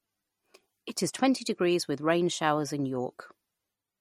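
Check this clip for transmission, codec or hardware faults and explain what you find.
One fault runs throughout: MP3 compression damage is plainly audible. Treble stops at 17.1 kHz and weak detail swirls, likely from MP3 encoding around 47 kbps, which starves the speech of bits.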